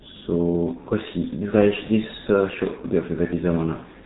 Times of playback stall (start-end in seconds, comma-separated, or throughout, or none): none